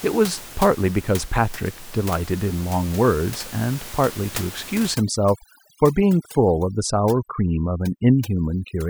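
A speech recording with room noise sitting about 16 dB below the voice. From 4.94 s to the end, overdone noise removal takes hold. Bands near the noise estimate are pulled down hard. The background drops and breaks up into twinkling specks. Quiet parts of the voice vanish too.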